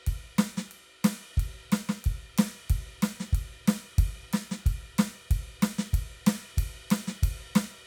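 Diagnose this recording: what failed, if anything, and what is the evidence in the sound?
Nothing failed; the music shows no audible fault.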